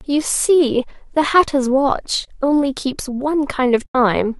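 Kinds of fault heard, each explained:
AAC frame loss with muting: frames were lost and the decoder zeroed them, so the speech fades into soft-edged gaps of 30 ms at 2.25 s and 90 ms at 3.86 s.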